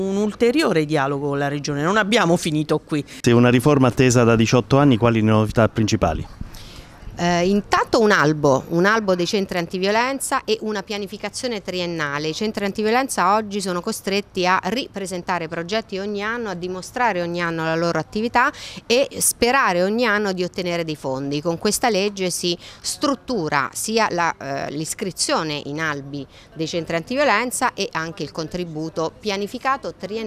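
Nothing is technically wrong with this sound clip.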